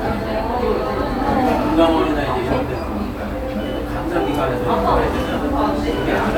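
No audible technical faults occur anywhere in this audio.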